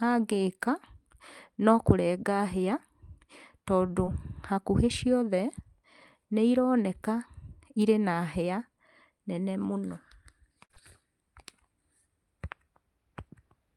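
At 4.05 s a short concealed packet loss occurs: about 20 ms of the call arrived too late for the decoder, and the receiver patched it by extending the preceding sound, adding a few milliseconds, which leaves a brief smear or wobble in the speech.

From 10.64 to 10.71 s a burst of packet loss removes about 60 ms at once. The receiver carries the last sound forward and fades it, so a held buzz or dying hiss replaces the missing stretch. Two more short concealed packet losses follow immediately, at 10.71 s and 10.74 s, each losing about 20 ms. This prolongs the wobbly, smeared patch before normal audio returns.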